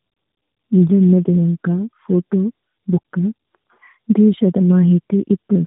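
Speech, with tandem speech coding throughout. Nothing is heard above 3.8 kHz. The sound is rough, muffled and warbly, as if coded twice. That fits two AMR-NB narrowband stages joined by a G.711 link, each coder working on the previous one's degraded output.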